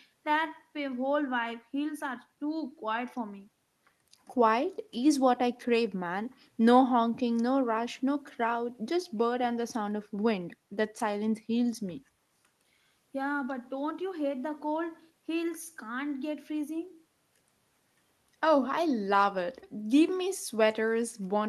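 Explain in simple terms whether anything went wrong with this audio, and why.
Nothing went wrong here; the speech has no technical faults.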